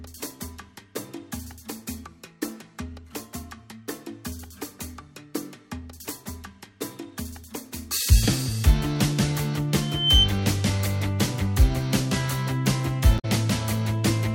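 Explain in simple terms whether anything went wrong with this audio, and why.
From 9.81 to 10.33 s there is loudspeaker feedback squeal: a microphone picked up its own speaker, and a 3.1 kHz tone built up over about a third of a second, ending well above the surrounding sound.

At 13.15 to 13.25 s, damaged data in a compressed stream makes the decoder misread a short stretch of the file, producing a brief chirp or blip.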